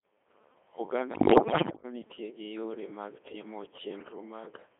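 Throughout the speech, the voice is robotic and buzzy, squeezed into a band of about 250 Hz to 3.4 kHz. This is heavy Codec 2 vocoder damage: only pitch, voicing, energy and spectral envelope survive, which fits the 2.4 kbit/s mode, and sine-wave resynthesis replaces the real waveform.

From 1.14 to 1.84 s the voice lurches in pitch, loudness and timbre, dissolving into warbles, bleeps and garbled robotic chatter. These are bit errors on digital voice radio. Around 15 percent of the bits flipped, corrupting the frame parameters across those 0.7 s.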